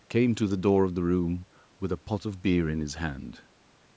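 Speech with no technical faults to be heard. It has passed through a call's microphone processing, which trims away the lowest bass and leaves nothing above 8 kHz.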